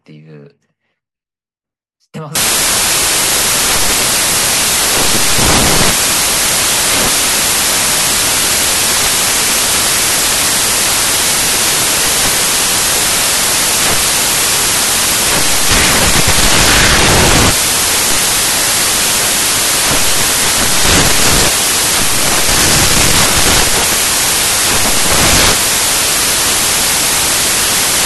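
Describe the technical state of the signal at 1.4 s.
At 1.4 s the speech signal is intact, with no audible technical fault at that moment.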